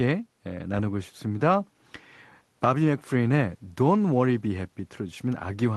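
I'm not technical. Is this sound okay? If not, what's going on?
Yes, this sound is okay; there's nothing going on with it that needs fixing.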